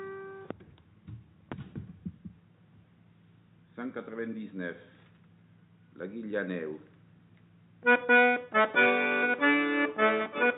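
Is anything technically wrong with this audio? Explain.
No, no technical faults detected.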